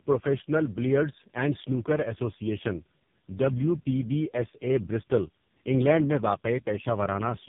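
Throughout the speech, tandem speech coding is audible. The signal passed through about three low-rate speech codecs in succession, each re-encoding the previous one's errors, which fits a chain ending at around 5.9 kbit/s. The result is rough, muffled and warbly, with nothing above 3.7 kHz.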